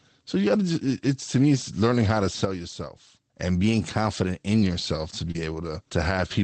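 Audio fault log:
2.45–3.36 s, sudden gain jump: Right after "it's learning how to", the level drops by about 8 dB in a single step. The background noise falls with it, which shows the change is in the whole signal, not in how loudly the person spoke. At 3.36 s the level steps back up just as abruptly. The likely cause is a digital gain setting applied from one sample to the next with no ramp, so the edges sound like hard steps rather than a fade.
3.64–4.62 s, drift correction step: Just before "yourself to", the audio suddenly runs about 6.1% fast for roughly a second. Pitch rises with it by 103 cents, slightly more than a semitone, so the voice sounds detuned and hurried. It then snaps back to normal. Speed and pitch moving together and then returning in one step point to clock-matching software that likely changed the playback rate all at once to drain or refill its buffer.
5.31–5.35 s, short concealed packet loss: Right after "yourself to", about 30 ms of the call never reached the decoder in time. 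The receiver filled a 31 ms gap by extending the preceding sound and then blended back into the real signal. This leaves a brief smear or wobble where the audio should have changed. The decoder's own concealment carries the patch across. Opus coding noise and the upper band limit near 8 kHz are present throughout the clip.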